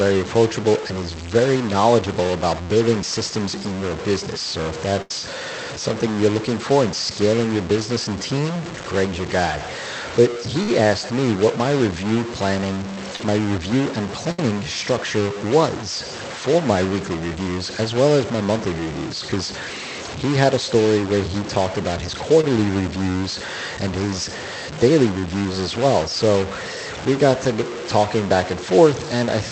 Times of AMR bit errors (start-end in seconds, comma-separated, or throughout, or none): none